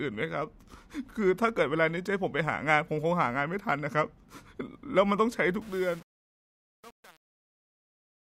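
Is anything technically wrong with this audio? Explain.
Yes. From 5.62 s to 8.22 s, the fade-out shows truncation distortion on a fade. An undithered gain stage keeps too few bits, consistent with about 7-bit resolution, so the quieter tail turns gritty.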